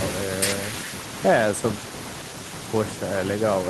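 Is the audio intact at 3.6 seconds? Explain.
Yes, the audio at 3.6 seconds is intact, with no fault at that point.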